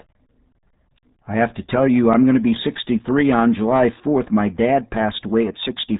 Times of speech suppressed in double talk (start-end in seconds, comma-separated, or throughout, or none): none